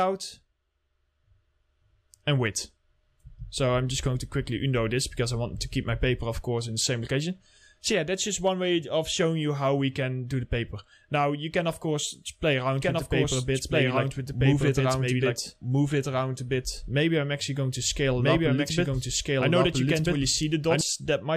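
A second copy of the audio was likely mixed in through a slower capture path, producing a doubled audio track from 12.81 s to 20.81 s. The copy trails by roughly one and a half seconds at about equal level, with no decay or room colour, and cuts in and out abruptly.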